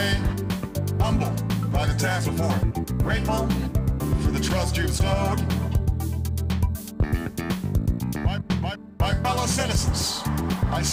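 Throughout, crude rate conversion from 48 kHz to 44.1 kHz drops samples unfiltered, leaving a gritty, inharmonic fizz around 25 dB under the signal.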